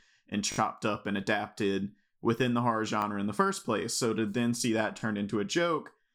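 Three times, fresh audio failed to reach the playback device in time and it replayed its last block, a repeated buffer fault. The repeats are about 20 ms long, which fits a 20 ms buffer. At 0.52 to 0.58 s the same slice of speech plays four times in a row, giving a brief buzzy stutter. At 3.02 to 3.04 s and 5.00 to 5.02 s it plays twice, heard as a single click-like hitch. Nothing appears to be skipped afterwards.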